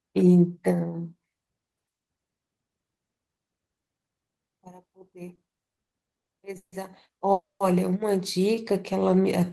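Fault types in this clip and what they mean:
Repeated stalls (stutter): Between 5.35 and 6.74 s the speech hitches eight times, each hold stretching the last sound, the longest for 150 ms. Packets kept arriving late, so the jitter buffer repeatedly ran dry; 390 ms of filler, 28% of the span, delays the audio without losing any.
Call audio freeze: At 7.32 s the sound hangs as a fading continuation, then drops to silence for 190 ms before resuming at 7.62 s with nothing skipped. The likely cause is packets held up in transit, emptying the jitter buffer and inserting a 280 ms gap.
Jitter buffer slow-down: From 8.55 to 9.46 s the speech drags at 91% speed with unchanged pitch, sounds drawn out. The receiver was rebuilding its buffer reserve by repeating single pitch periods and bits of pauses, adding 90 ms across the stretch.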